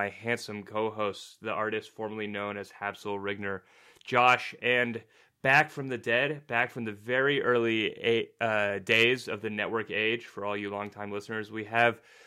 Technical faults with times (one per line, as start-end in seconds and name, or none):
none